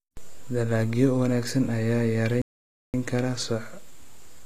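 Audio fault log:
throughout, transcoding between lossy codecs: The speech has likely passed through an MP3-style encoder and then a low-rate HE-AAC stage. The second encoder spends bits on the first one's smearing and adds its own swirly, thin treble, so both kinds of artefact are heard together.
2.42 to 2.94 s, playback stall: The player likely ran short of data or was held up, so output went silent for about 0.52 s. The speech breaks off mid-flow at 2.42 s, then resumes at 2.94 s once playback recovers.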